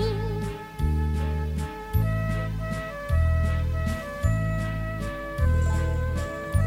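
No technical faults can be heard anywhere in the clip.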